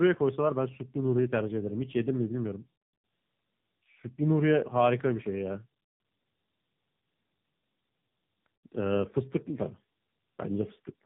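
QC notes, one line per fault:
Throughout: tandem speech coding. The speech sounds rougher, more muffled and more warbly than a single narrowband pass would leave it, which points to two AMR-NB coding stages in a row, likely with a G.711 A-law link between them. Each AMR-NB stage re-encodes audio the previous one already smeared, so the errors compound into a gritty, swimming texture. Nothing remains above 3.8 kHz, which leaves sibilants dull and the overall tone boxed-in.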